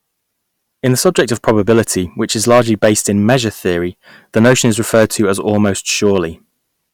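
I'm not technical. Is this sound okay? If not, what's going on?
No. The speech has hard clipping from start to finish: the signal was pushed too loud, so the loudest moments get their tops sliced flat. You hear crackle only on loud bursts, a small fraction of the sound, unlike steady background hiss, which stays constant.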